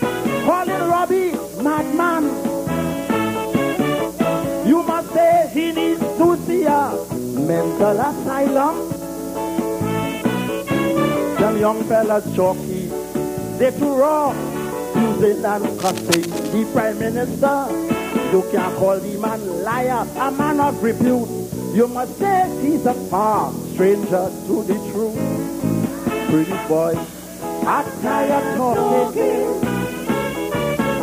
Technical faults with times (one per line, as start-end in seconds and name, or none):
15.78-16.54 cable scratch noise